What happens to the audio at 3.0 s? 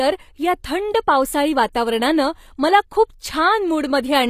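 At 3.0 s the speech carries the same HE-AAC compression that runs through the whole clip, most likely from a low-rate encode, which fits roughly 24 kbps. Only the lower band is truly coded; the treble is rebuilt by copying lower bands upward, so s sounds come out gritty and metallic with plainly audible damage. A spectrogram shows a hard ceiling near 15 kHz and smeared, repeated-looking texture in the upper band.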